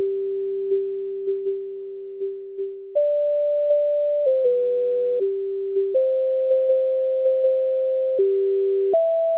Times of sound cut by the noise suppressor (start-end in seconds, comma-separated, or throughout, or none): 0.37-2.96